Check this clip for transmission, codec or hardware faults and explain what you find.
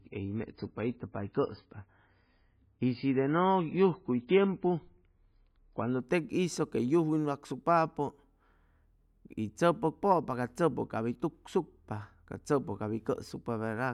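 One fault is present, at the start of the speech. Adaptive stream starting at a low bitrate, 0 to 6.0 s: the player began on a low-quality version to start quickly, then stepped up after measuring the connection. Nothing sounds above 5 kHz and artefacts are stronger, fitting roughly 16 kbit/s MP3. At 6.0 s quality jumps, without a gap, to something fitting 128 kbit/s.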